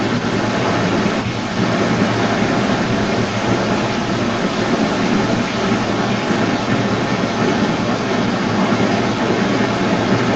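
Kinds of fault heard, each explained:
Echo leak: Throughout the speech a second copy trails the direct sound by about 188 ms, strong enough to sit roughly 10 dB above the speech itself, returning as a delayed copy of one voice within the call's 8 kHz band. The likely cause is a far end listening on a loudspeaker whose echo canceller failed to strip what its microphone picked back up, so that leaked speech was returned down the line.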